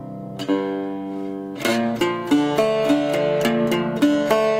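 No technical faults can be heard anywhere in the audio.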